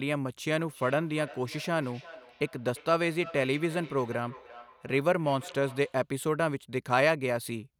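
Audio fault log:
0.53–6.09 s, feedback echo between two devices: the speech returns at a fixed spacing of roughly a third of a second, peaking about 20 dB below the direct sound. A second device replays what this microphone sent and the microphone captures it again. The steady delay distinguishes it from room reverberation.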